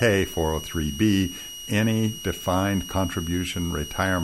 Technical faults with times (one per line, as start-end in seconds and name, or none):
0.00-4.23 switching supply whistle